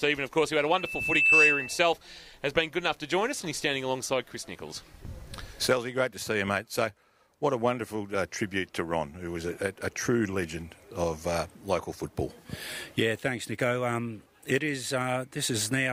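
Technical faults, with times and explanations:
0.59–1.88 s, loudspeaker feedback squeal: a single tone at 2.6 kHz rises out of the sound, swelling over roughly 0.7 s until it sits about 10 dB above the rest of the audio, then stops. A microphone was picking up the loudspeaker it fed, and at that one frequency the loop gain exceeded unity, so the tone fed on itself. Unlike a steady interfering whine or test tone, it starts quiet and grows.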